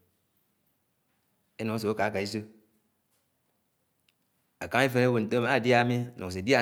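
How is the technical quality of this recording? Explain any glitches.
The recording has one glitch: a single sharp click at 5.38 s, most likely caused by dropped samples. A tiny fraction of a millisecond of the stream goes missing, so the waveform jumps straight from one value to a later one instead of moving smoothly between them. That step is far too brief to remove any audible sound from the speech. It is heard only as a momentary click, and a spectrogram shows it as a thin vertical line across all frequencies.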